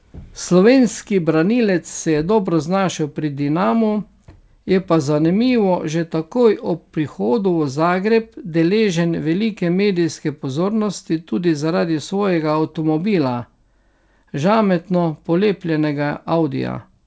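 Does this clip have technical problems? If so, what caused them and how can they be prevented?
No, the speech comes through a call path without any technical problems, its content stopping at about 8 kHz as expected for a wideband call codec such as G.722 at around 64 kbps.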